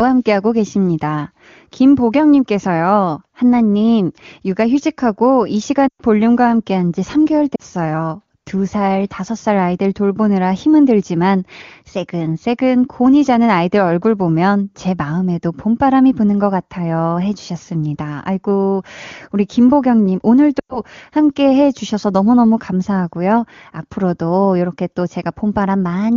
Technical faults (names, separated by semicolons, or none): lost AMR speech frames